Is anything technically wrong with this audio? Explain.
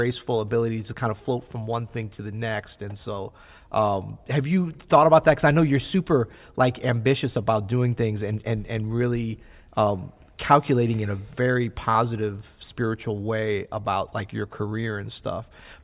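No, nothing technically wrong can be heard in this speech recording, as the signal stays continuous and intact with no audible faults at any point.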